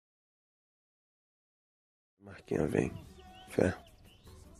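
No technical faults can be heard: the level rises in a smooth, deliberate fade-in that begins at around 2 s and reaches full level at 2.85 s, with no click or hard edge.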